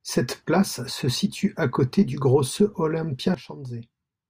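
A short speech recording with a sudden gain jump at 3.34 s, where the level drops by about 12 dB in a single step and stays down through the end of the clip. The speech and the background noise fall together, with no fade at all, so it sounds like a fader slammed rather than the talker backing off the mic. That's most likely a digital gain setting or bit shift applied instantly instead of being ramped in.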